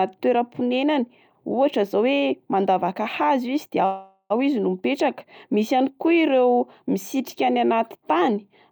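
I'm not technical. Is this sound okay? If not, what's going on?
No. At 3.85 s the call's audio packets were likely held up on the network, so the receiver ran out of sound to play. It stretched the last bit into a fading buzz until 4.32 s, a call audio freeze. Speech then resumes at "izy no mipetraka misy", about half a second late, with nothing lost.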